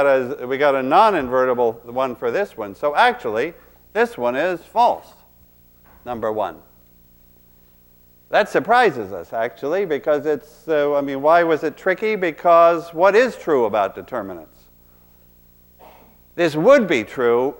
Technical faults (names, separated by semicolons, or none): video or display buzz